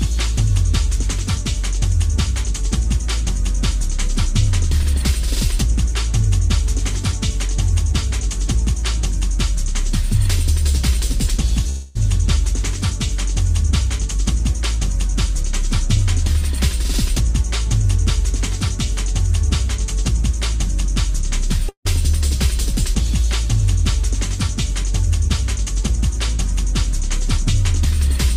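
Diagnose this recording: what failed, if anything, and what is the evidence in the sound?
The network stage likely failed, with two long network dropouts. At 11.69 s the sound becomes a fading buzz for 0.26 s. At 21.69 s a 0.16 s fill decays toward silence. Packets stopped arriving, the receiver extended the last sound, and the lost audio never returned.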